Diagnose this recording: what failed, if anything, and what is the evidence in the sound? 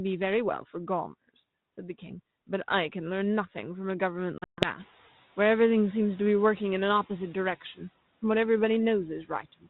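Packet loss on an ADPCM call, 4.38 to 4.69 s, network stage: 180 ms falls to hard-edged silence, and the desynchronised predictor returns speech slightly distorted.

Speech cut by the noise suppressor, 9.24 to 9.67 s, call processing: mistaken for noise, roughly 150 ms of speech drops by up to about 17 dB and sounds swallowed.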